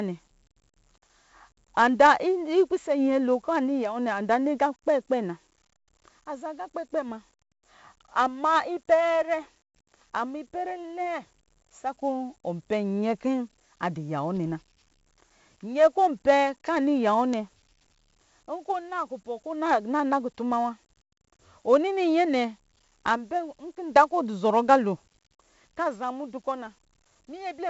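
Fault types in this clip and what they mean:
4-bit ADPCM compression: throughout the speech, each sample is coded as a small 4-bit step from a predicted value, with the step size adapting as the signal changes. The quantisation error becomes a gritty hiss that rises and falls with the speech level, and the damage here is heavy. Sharp onsets smear where the step size lags behind. Nothing reaches above about 7.7 kHz, and the rate of 64 kbps fits 4 bits per sample at a reduced sample rate, which dulls the top end.
Bit error spike: at 3.85 s, 14.44 s and 17.34 s, a single flipped bit throws one sample, or two in a row at 17.34 s, far off its true value by a power of two before the next sample returns to normal. The result is a sharp, isolated tick with energy spread across the whole band. It has nothing to do with the speech around it, and it is far too brief to carry any pitch or tone of its own.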